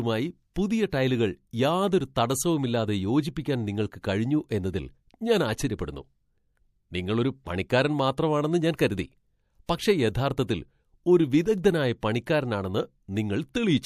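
The codec never switches to short blocks, so quantisation noise from each sharp attack spreads backward across its long transform window, which fits a window of about 36 ms. This pre-echo is audible as a short hiss, about 13 to 22 dB above the surrounding floor and lasting roughly 20 to 27 ms, just before the attacks at 0.54 s (before "പുതിയ ടൈലുകൾ യാതൊരു തടസ്സവുമില്ലാതെ"), 0.90 s, 4.02 s (after "യാതൊരു തടസ്സവുമില്ലാതെ യോജിപ്പിക്കാൻ നിങ്ങൾക്ക്"), 8.77 s, 9.66 s (after "പണിക്കാരൻ മാത്രമാണെന്ന് ഞാൻ കരുതി") and 12.01 s. Each of those onsets sounds smeared rather than crisp.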